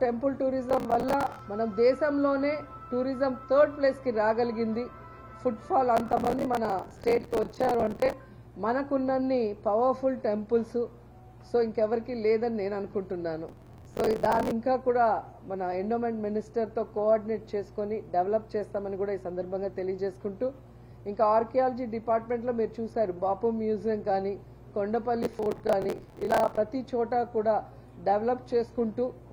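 Underneath the whole recording sits a mains hum, a steady 60 Hz tone with some low harmonics, around 25 dB below the main signal. A ground loop or nearby transformer is letting the power line leak into the audio path. On a spectrogram it is an unbroken horizontal line at 60 Hz, with fainter lines at 120 and 180 Hz, running from start to finish regardless of what the rest of the sound does.

Processor overload crackle breaks out four times: from 0.70 to 1.39 s, from 5.97 to 8.13 s, from 13.49 to 14.51 s, and from 25.23 to 26.58 s. In each stretch the processor fell behind and missed roughly 30 to 100 buffer deadlines again and again. Each miss replayed a short scrap of old audio with hard edges, which fits buffers of roughly 10 ms. The result is a gritty, tearing crackle riding on the sound that stops as soon as the load eases. On a waveform these spans show choppy, repeated segments with abrupt jumps at their joins. 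A spectrogram shows dense vertical broadband streaks.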